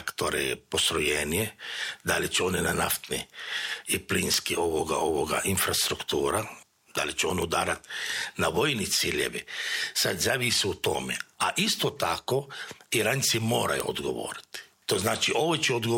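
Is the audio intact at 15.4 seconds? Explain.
Yes, at 15.4 seconds the audio is intact, with no dropout, click, distortion or other fault at that point.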